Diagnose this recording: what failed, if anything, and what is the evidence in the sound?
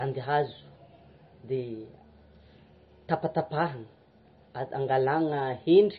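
Throughout the speech the sound is watery and swirly, with a metallic chirp on the s sounds and softened consonant attacks, and the treble stops abruptly at about 5.9 kHz. This is heavy damage at the codec stage, most likely MP3 compression at a low bitrate, fitting roughly 24 kbps. Short of bits, the encoder cuts everything above that fixed frequency and zeroes weak spectral lines, which flicker on and off between frames and produce the swirling.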